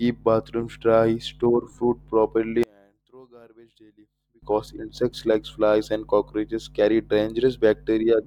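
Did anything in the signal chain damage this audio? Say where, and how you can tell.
Yes: from 2.63 to 4.42 s the speech collapses by about 31 dB to a faint residue, not silence, as one channel inverted would likely cause when the stereo pair is summed to mono in the wiring.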